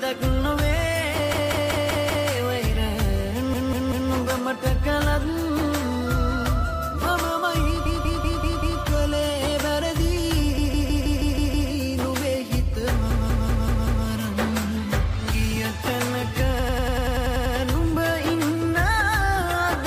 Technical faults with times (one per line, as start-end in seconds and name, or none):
1.33-2.29 repeated frames
3.53-4.11 repeated frames
7.85-8.81 repeated frames
10.57-11.69 repeated frames
13.10-14.06 repeated frames
16.59-17.55 repeated frames